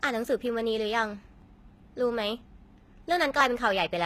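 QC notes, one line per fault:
Throughout: likely HE-AAC compression. S sounds come out gritty and lispy, and there's nothing above 14.9 kHz. The treble is copied up from lower bands, so harmonics don't line up, which fits a low bitrate around 20 kbps.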